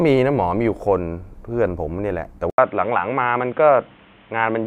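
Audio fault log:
2.50–4.66 s, input switched to a poorer device: An 80 ms gap, then the speech turns dull and boxy, with nothing above 3.8 kHz. New background noise appears, roughly 30 dB down. Loudness holds steady. Likely a narrower-band microphone or headset taking over.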